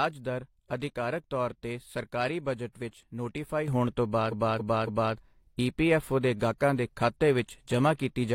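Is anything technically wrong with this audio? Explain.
Yes, there are two faults in this speech.

At 3.68 s there is a sudden gain jump. The level rises by about 8 dB in one step and stays there to the end. The speech and the background noise jump together. The likely cause is a gain setting applied without a ramp.

From 4.28 s to 5.11 s there are repeated frames. A 278.6 ms block plays three extra times. The speech stutters. This adds 835.9 ms to the audio.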